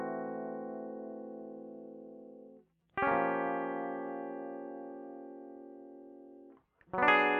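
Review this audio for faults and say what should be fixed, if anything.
Nothing in the music needs to be fixed; no faults can be heard.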